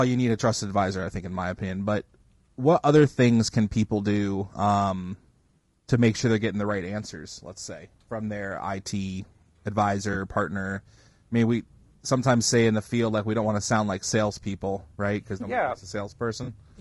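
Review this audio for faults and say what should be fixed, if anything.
Low-delay AAC compression, likely AAC-ELD, runs through the whole speech clip. Its short analysis frames resolve the pitch harmonics of the voice poorly, and at a low rate, with the damage plainly audible and consistent with about 32 kbps, the coder can't spend enough bits on them. The voice comes out rough and grainy, with noise filling the gaps between harmonics and a thin, synthetic-sounding top band. To prevent it, raise the bitrate or switch to a codec mode with longer frames where latency allows.

AAC frame loss with concealment happens twice. At 10.13 to 10.16 s, a gap of about 20 ms that fits a single lost frame, the decoder patched the hole from the previous good spectrum, leaving a brief smeared, noisy blip. At 16.43 to 16.48 s, about 40 ms that fits two consecutive frames, the fill-in runs longer and leaves a longer smeared, noisy patch. 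To prevent it, stabilise the transport path and add forward error correction or a deeper jitter buffer so frames arrive intact.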